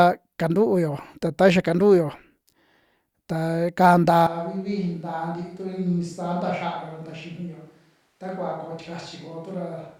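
At 4.27 s the speech abruptly turns roomy and hollow and stays that way to the end, likely a switch to a distant microphone after the close one dropped out. The level falls by about 10 dB, bass thins, and a steady room noise sits roughly 40 dB below the speech. On the waveform the envelope steps down at once; the spectrogram shows weaker low frequencies, smeared reverberant tails after syllables, and a faint broadband floor between them.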